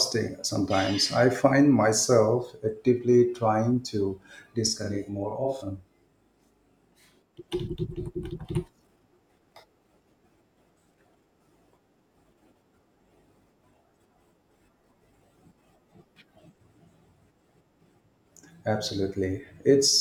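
From 4.67 to 7.39 s, just after "myself actively trying to", the speech turns doubled, as if a second copy trails right behind the first at equal loudness, giving a short slapback smear rather than a clean single voice. This is a channel delay (doubling): one channel has fallen about 40 ms behind the other, likely from an extra buffer on that side, and once the two are summed to mono, the late copy stands apart as its own echo.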